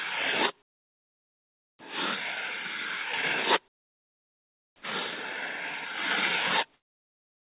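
From 0.62 to 1.79 s, 3.68 to 4.82 s, and 6.74 s to the end, comfort noise replaces the background: steady featureless hiss, about 14, 6 and 2 dB quieter, likely from discontinuous transmission.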